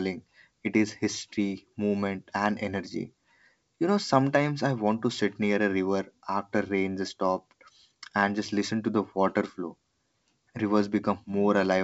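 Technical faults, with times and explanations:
No technical faults detected.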